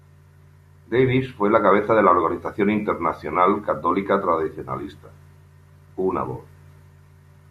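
No technical faults can be heard anywhere in this speech recording.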